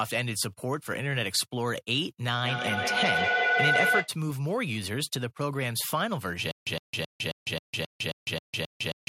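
A speech recording with two faults. From 2.44 to 4.15 s there is a feedback howl: sound from a loudspeaker is being picked up again by a microphone on the same call, and each pass round the loop adds gain. The repeats grow, narrow to a tone around 1.5 kHz, and pulse at roughly a fifth of a second, the loop's delay. The tone peaks about 5 dB above the speech before the loop is broken. From 6.51 s to the end the sound becomes a stutter with silent gaps. A fragment of about 0.11 s plays, then about 0.15 s of digital silence follows. This repeats nine times on an even 0.27 s cycle. The likely cause is a stalled player or stream that replays its last buffered fragment at each retry and then runs empty, so the audio due in that stretch never arrives.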